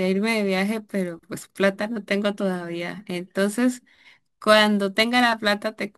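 A gritty, inharmonic fizz rides on the speech from start to finish, strongest on loud and bright sounds. This is crude rate conversion. Samples were dropped or repeated without filtering, which fits a change from 48 kHz to 44.1 kHz, leaving error roughly 25 dB below the speech.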